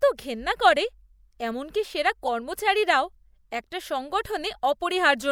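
Damaged bits in the compressed speech stream reached the decoder, which played them anyway: a corrupt frame decoded at 2.26 s. A couple of frames carry misread gains and codes, so a brief, fairly loud blip of misplaced energy, peaking at about -15 dBFS, cuts across the speech.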